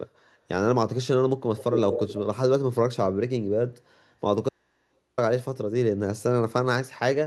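From 1.55 to 2.18 s the speech is trailed by a second copy of itself arriving about 236 ms late, only slightly quieter than the original, so the two overlap into a smeared doubling. This is an echo leak. It is likely that the far end was on a loudspeaker and its echo canceller let part of what its microphone picked up pass back into the call.

At 4.49 s the speech cuts out abruptly, and for about 0.69 s, until 5.18 s, only a low mains hum remains, far below the level of the speech, before the sound snaps back mid-flow. This is an audio dropout to a faint residue. The wanted signal was likely lost while the path after the break stayed live, leaving the open input's hum exposed.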